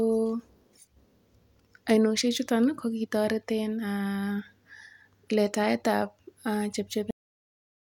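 At 7.11 s the speech stops abruptly mid-sound, a cut-off end: the final buffers were never written, so audio drops straight to digital silence without decay.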